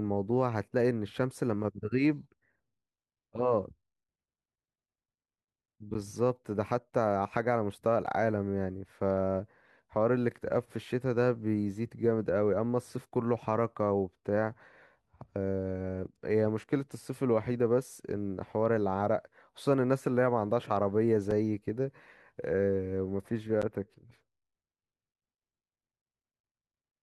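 Blocks of digital silence fall at 5.94, 8.06, 21.31 and 23.62 s. The speech drops abruptly to silence and returns with no fade, so each gap is heard as a tick or dip. Three last about 10.7 ms, which fits an unfilled 512-sample buffer. The one at 21.31 s is shorter, at about 4.7 ms.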